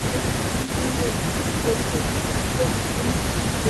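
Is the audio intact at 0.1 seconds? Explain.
No. At 0.1 s a faint, delayed second copy of the speech trails the main voice by about 128 ms, sitting roughly 10 dB below it. This echo leak runs through the whole clip, from 0.00 to 3.69 s. It is likely caused by a far end playing the call over a loudspeaker, where the echo canceller failed to remove everything its microphone picked up. The residue was sent back as that lagging copy.

The speech also dips from 0.06 to 0.15 s, falling by roughly 10 dB at its deepest for about a tenth of a second. It sounds briefly pulled down rather than cleanly present. This is speech suppressed in double talk, likely the result of both sides talking at once. Unable to tell the local talker from the loudspeaker echo, the canceller attenuated both, and the voice at 0.1 s gets caught in that drop.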